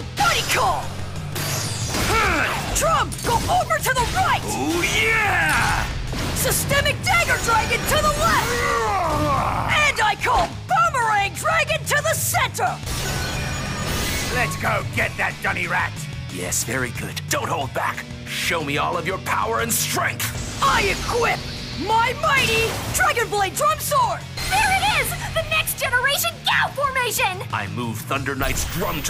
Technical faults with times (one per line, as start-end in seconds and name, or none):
17.87-22.76 mains hum